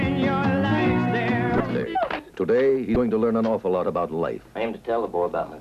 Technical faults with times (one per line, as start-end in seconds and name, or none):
1.57-1.60 damaged data in a compressed stream
2.93-2.96 damaged data in a compressed stream